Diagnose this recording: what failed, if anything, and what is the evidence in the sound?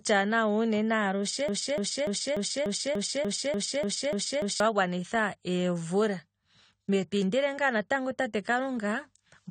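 Dull, smeared speech with fizzy, warbling sibilants and nothing above 9 kHz throughout, likely AAC compression at a low bitrate, which fits about 32 kbps.

From 1.49 to 4.60 s a 0.29 s fragment repeats eleven times before "wa gwanitha", a broken-record loop, likely from a stalled stream or player.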